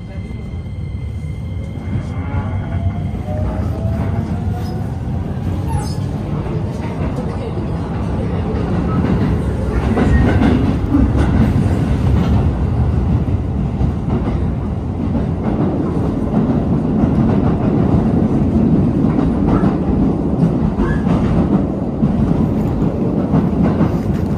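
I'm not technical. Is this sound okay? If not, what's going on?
Yes, this sound is fine, and there's nothing wrong with it that you'd need to worry about.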